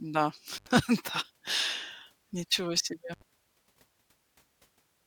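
At 0.56 to 0.68 s and again at 3.13 to 3.22 s the speech cuts out through intermittent contact, a loose connection opening for about 78 ms and 74 ms. Crackle at each edge and faint hiss in the gap set it apart from a clean digital dropout.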